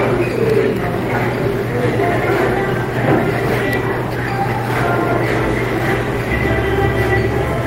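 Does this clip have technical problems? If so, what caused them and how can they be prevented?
No, there are no faults.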